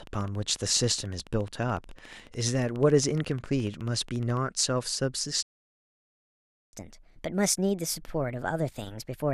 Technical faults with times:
0.07-4.38 train of clicks
5.43-6.73 playback stall
6.73-9.34 catch-up at higher speed

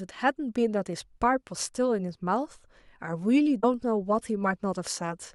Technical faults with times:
3.62 compressed frames skipped

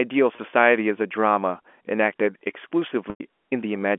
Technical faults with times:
0.36-0.38 packet loss with pitch repetition
3.10-3.20 packet loss with pitch repetition

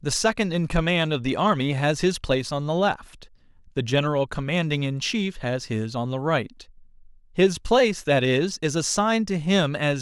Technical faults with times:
0.00-10.01 sample clock jitter

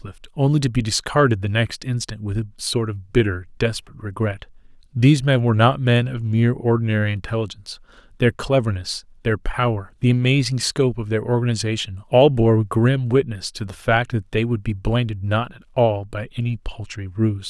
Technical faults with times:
none

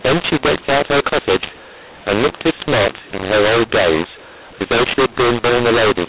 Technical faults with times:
0.00-6.08 mu-law and A-law mixed up

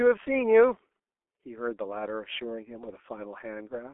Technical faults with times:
0.00-3.94 G.723.1 codec

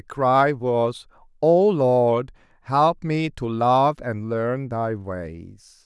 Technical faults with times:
none

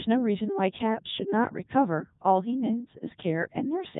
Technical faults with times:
0.00-4.00 Codec 2 vocoder

